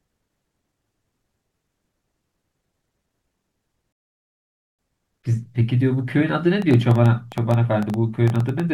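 At 3.92 s the speech stops dead in a rebuffering stall and resumes at 4.79 s exactly where it left off, adding 0.86 s of silence rather than losing any sound. From 6.62 to 8.61 s a train of clicks runs over the speech, around twenty near-identical pulses at about 9 per second, unevenly spaced, peaking roughly 5 dB above the signal. The likely cause is nearby interference or a struggling interface, rather than damage to the recording itself.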